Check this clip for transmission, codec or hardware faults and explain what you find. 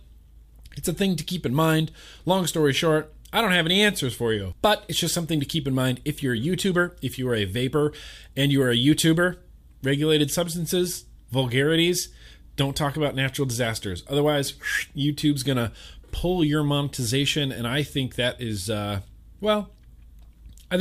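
Nothing in the speech signal points to a transmission, codec or hardware fault at any point.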